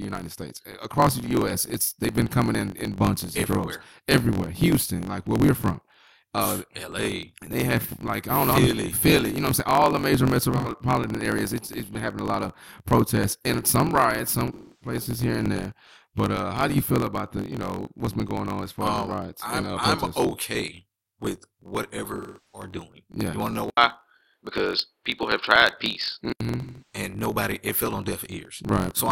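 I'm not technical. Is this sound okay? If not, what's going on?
No. Throughout the speech there is a steady low buzz, about 46 times a second, and everything runs about 7% fast while keeping its normal pitch. This is a block size mismatch (truncated): one stage hands over longer chunks than the next accepts, which fits 1024-sample blocks, and each chunk's tail gets dropped.

Four spots turn smeared, hollow or briefly silent: at 10.57 s for about 0.14 s; from 14.53 to 14.95 s, between "and some riots some" and "here and there"; from 22.17 to 22.66 s, after "I'm okay with whatever"; and from 26.61 to 26.95 s. This is AAC frame loss with concealment: pieces of compressed audio went missing, and the decoder filled the gaps by guessing from what came before.

Right after "you want to know", at 23.70 s, the sound drops out for a moment, then turns duller and more muffled, with a slightly different loudness and its own faint background, until 26.40 s. 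The likely cause is an input switched to a poorer device, such as a different microphone.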